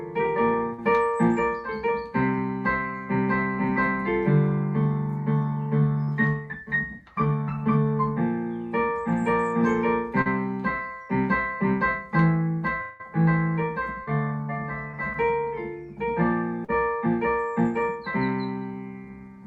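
Packets arriving too late for the decoder cause short concealed packet loss at 0.73, 6.04, 10.22, 14.03, 14.91 and 16.64 s: the receiver patches gaps of 20 to 40 ms by extending the preceding sound, leaving brief smears or wobbles. A likely long network dropout at 12.81 to 13.01 s leaves about 0.18 s filled by a continued, fading buzz or hiss before the audio resumes with that stretch missing.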